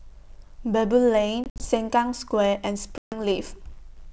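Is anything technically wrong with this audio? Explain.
Yes. There is packet loss on an ADPCM call, heard twice in this speech. From 1.44 to 1.70 s, about 100 ms of audio drops out in several hard-edged gaps, the longest 60 ms. From 2.98 to 3.20 s about 140 ms is lost. The missing audio is replaced by silence. The receiving decoder's adaptive predictor and step size then no longer match the sender's, so the speech resumes with brief distortion. The wideband G.722 coding itself carries the speech cleanly.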